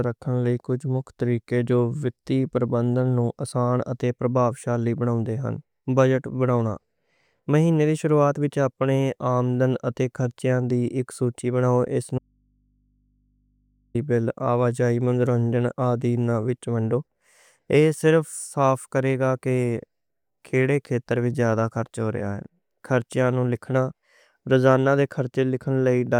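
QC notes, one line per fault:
12.18–13.95 s: audio dropout to a faint residue. The speech cuts off abruptly and returns just as abruptly about 1.76 s later. The gap is not silent: it holds a low mains hum sitting roughly 45 dB below the programme level. A break this sudden, with live hum underneath, is likely a momentary loss of the source feeding an input that stayed open, rather than a pause or fade in the recording.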